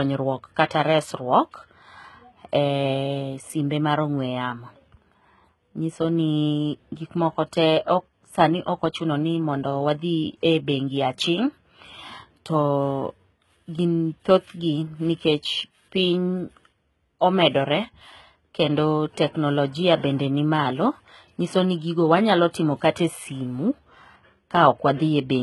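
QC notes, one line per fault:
Throughout: HE-AAC compression, heavy, pointing to a very low bitrate near 16 kbps. The treble is likely rebuilt by copying lower bands upward, so s sounds turn gritty and metallic. A spectrogram shows smeared, repeated upper-band texture and nothing above 11.8 kHz.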